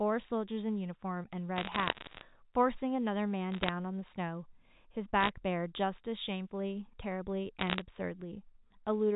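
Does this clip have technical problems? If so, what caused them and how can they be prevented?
Yes, there are bit errors on a digital phone line: crackly bursts of sharp ticks at 1.57–2.21 s, 3.52–3.69 s, 5.21–5.29 s and 7.59–7.82 s over the G.711 speech. At an error rate just under one percent, flipped bits corrupt individual samples, and hits on sign or high bits click loudest. A cleaner line or error-protected transport would prevent it.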